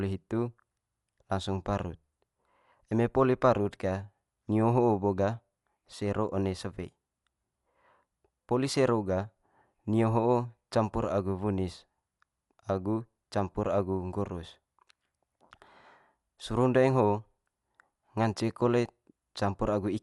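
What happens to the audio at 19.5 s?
At 19.5 s the speech is still passing through what is likely Dolby Digital compression, which runs through the whole clip. Starved of bits, the encoder narrows the band and leaves many frequency lines without detail, and the decoder fills those gaps with noise. The damage is plainly audible here: nothing above 11.5 kHz remains, so the speech sounds dull, with a rough, fluttering grain around its tones, which fits a low bitrate near 64 kbps.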